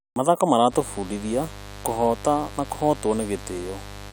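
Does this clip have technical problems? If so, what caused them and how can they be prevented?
Yes. A mains buzz enters at 0.69 s and continues to the end of the speech at 4.13 s, a steady, raspy drone sitting roughly 15 dB below the voice. Sharp switching spikes from a dimmer, rectifier or poorly shielded cable couple in twice per 50 Hz cycle, so a spectrogram shows evenly spaced horizontal lines at 50 Hz multiples climbing into several kHz, and the waveform carries narrow spikes every 10 ms. Keeping audio cables shielded and away from dimmers and power supplies, and using a balanced connection, would prevent it.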